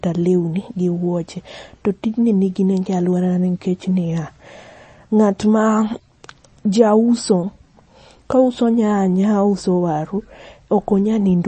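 Right through the speech there's plainly audible MP3 compression, likely from a starved bitrate near 32 kbps: nothing above 8.3 kHz, with watery, swirly artefacts.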